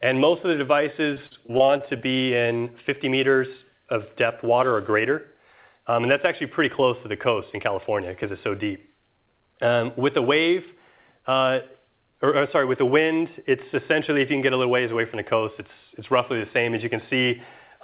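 From 1.14 to 2.02 s, repeated packet loss makes the sound choppy and robotic. Holes up to 43 ms long arrive one after another, each patched by extending the last sound, rather than a single dropout. From 2.58 to 2.62 s, a short concealed packet loss fills a lone 20 ms hole and blends back, leaving one brief smear with no chain of repeats. Through both, the call path's 4 kHz ceiling stays audible.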